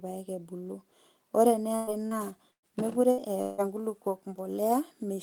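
At 1.75 s a burst of packet loss begins. About 120 ms of speech never arrived in time, and the receiver stretched the last sound over the hole for roughly 0.12 s, fading it out, so you hear a held, thinning buzz or hiss before the speech picks up again with a chunk skipped. It happens again at 2.51 s, and this time the fill dies away into about 90 ms of near-silence before the audio resumes. The third burst, at 3.11 s, is shorter: roughly 80 ms goes missing and is covered by a quick fading smear through 3.21 s.

Between those, at 2.07 s, there's a short concealed packet loss. Only about 40 ms dropped out, and the decoder papered over it by extending the last sound and blending back into the real signal by 2.14 s. It's just a brief smear or wobble, and a small bit of a sound can slip away.

Last, from 3.42 to 3.61 s, the audio cuts out for about 0.19 s in what's likely a long network dropout. 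The gap is filled the whole way with a fading continuation of the sound that came before, with no dead silence, and then the speech carries on with roughly 160 ms of it gone.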